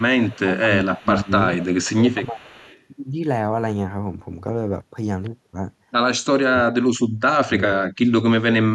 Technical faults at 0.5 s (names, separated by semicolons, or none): speech suppressed in double talk